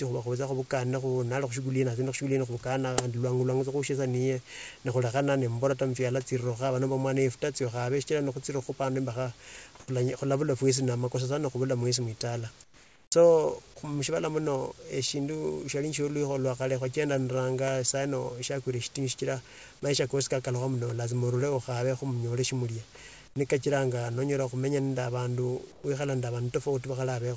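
At 9.80 to 9.88 s, 12.64 to 13.12 s, 23.28 to 23.36 s and 25.72 to 25.84 s, the room background turns into a flat, featureless hiss. This is comfort noise in place of the background, likely because the sender paused transmission in silence. The hiss is about 2 dB louder in the first gap and about 12, 10 and 4 dB quieter in the others. At 13.10 to 13.12 s, the sound returns abruptly and loses its soft start. This is an onset clipped by the voice detector, likely because it reacted late.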